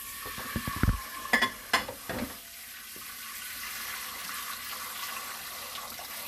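A recording of sounds with plainly audible MP2 compression throughout: dulled top end, flickering upper sub-bands and granular gurgle, likely from MPEG Layer II coding at a low rate fitting 80 kbps. From 2.53 to 2.77 s, DAB burbling adds short blips of noise in single sub-bands, consistent with bit errors at a fraction of a percent corrupting 10 frames.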